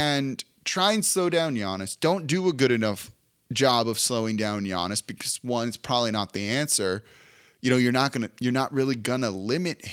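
No technical faults can be heard anywhere in the speech. Nothing in the recording calls for a timestamp or a correction.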